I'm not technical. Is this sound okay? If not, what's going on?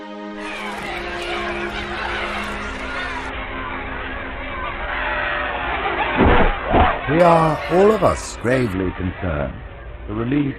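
No. From 3.29 to 7.20 s and again from 8.73 s to the end, a Bluetooth SBC bit pool drop squeezes the audio: treble goes dull and gritty noise creeps in.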